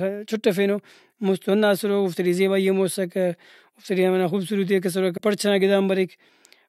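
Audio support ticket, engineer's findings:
Damaged data in a compressed stream, 5.14 to 5.20 s. Brief glitch lasting about 70 ms. Probable component: the encoded stream or file. Corrupted bytes in the frames there; the decoder misreads or rejects them, loses frame sync, then resumes at the next valid header. Check the source file, transport and storage for byte errors.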